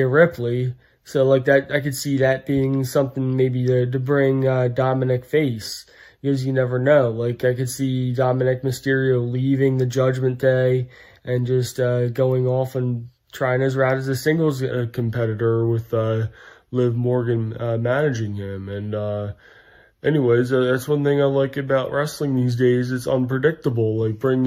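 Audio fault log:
14.71–24.47 s wrong sample rate: From 14.71 s to the end, the samples are clocked out slower than they were captured, with no rate conversion. The slowdown to 0.919 times normal speed fits 48 kHz material played back at 44.1 kHz. Because timing and pitch both come from the sample clock, they drop together. The sound runs slower and sits about 1.47 semitones lower, heavier and more dragging than the earlier part.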